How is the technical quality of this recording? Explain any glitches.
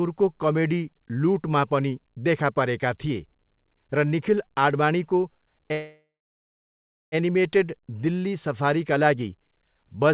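The recording has one glitch, a call audio freeze, heard through a narrowband call path with nothing above 4 kHz, which fits G.711 A-law at 64 kbps.

From 5.72 to 7.15 s there is a call audio freeze. The last sound is carried on briefly, then about 1.05 s of silence follows. The likely cause is delayed packets draining the jitter buffer. Playback then resumes where it stopped, inserting about 1.4 s with nothing lost.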